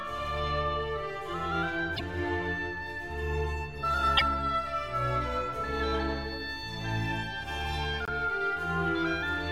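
At 1.96 to 2.01 s, 4.17 to 4.22 s and 8.05 to 8.09 s, the music skips forward with a brief garbled break. Each lasts about two frames, which fits 24 ms MP3 frames. The likely cause is a broken MP3 bit reservoir.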